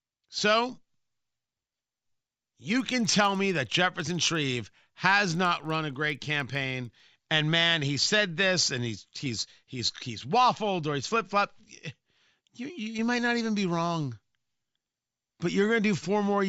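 From 1.95 s to 7.0 s the speech carries a rough, regular ticking at 20 per second, heard as a buzz that rides on the voice and drops away in the pauses. This is a resampler restarted on every block: the audio was converted in separate 50 ms chunks, consistent with an upsampling from 16 kHz to 48 kHz. At each chunk boundary the converter lacked the true neighbouring samples, leaving a small error at every edge.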